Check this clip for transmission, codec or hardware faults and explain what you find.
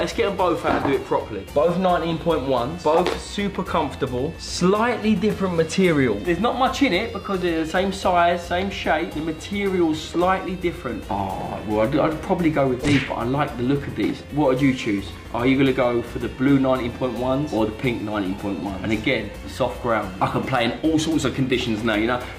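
One transmission fault is present: chunks out of order, from 5.30 to 5.32 s. A short piece of audio, about 5.8 ms long, arrived three chunks late and plays after the material that should follow it. Nothing is missing, but the swap creates three hard joins within roughly 23 ms, heard as a brief jumbled moment. On a waveform, the trace jumps abruptly at each join. A spectrogram shows thin vertical broadband lines there.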